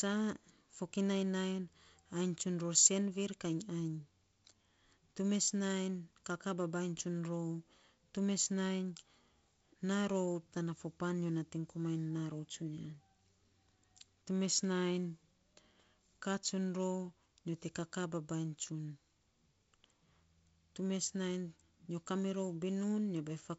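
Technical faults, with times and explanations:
No technical faults can be heard in this speech clip, so there are no times or explanations to give.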